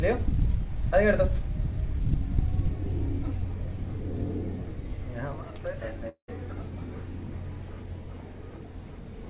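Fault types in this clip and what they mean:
long network dropout: From 6.09 to 6.29 s the audio likely stopped arriving. The last sound stretches into a fading buzz or hiss, then about 0.1 s of silence, and playback resumes with 0.19 s missing. A spectrogram shows smeared bands fading into a blank gap.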